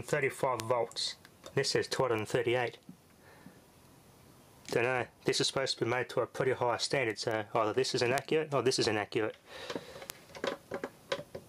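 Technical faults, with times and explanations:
0.60, 2.19, 7.31, 8.18 and 10.10 s, bit error spike: a single bit flipped in storage or on a digital link, throwing one to three samples off by a power of two before they snap back. Each is a sharp broadband tick unrelated to the sound, about -11 dBFS at 0.60, 8.18 and 10.10 s and about -23 dBFS at 2.19 and 7.31 s.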